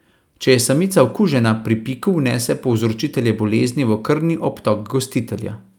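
No technical faults can be heard anywhere in the recording.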